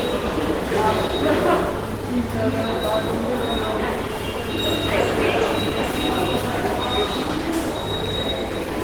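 A clip of sounds carries plainly audible Opus compression throughout. Textures sound muffled and hoarse rather than swirly. The band still reaches about 20.2 kHz. The damage likely comes from Opus in its hybrid mode at a rate around 16 kbps.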